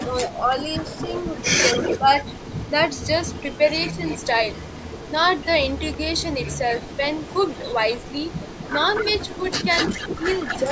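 From 0.0 to 0.09 s, speech is suppressed in double talk: the echo canceller likely mistook overlapping talk for echo and turned the speech down by about 5 dB, a brief dip. An echo leak follows from 0.29 to 0.47 s, likely a loudspeaker's echo slipping past cancellation, giving a faint copy 254 ms late at about 25 dB below the speech. From 0.9 to 10.62 s, a stronger echo leak, likely the same incomplete cancellation, trails the speech by 244 ms at only about 10 dB down, a delayed double. Double-talk suppression returns at 10.18 to 10.28 s and 10.61 to 10.7 s, likely from the canceller again clamping both sides, with short dips of about 5 dB.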